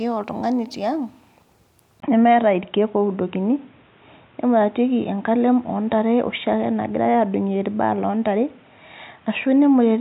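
At 2.00 s the recording likely changed its input to a poorer device, a clear case of input switched to a poorer device: after a 20 ms silence, the speech turns dull and boxy with nothing above 3.8 kHz, shifts modestly in level, and carries a new, faint background noise until the end.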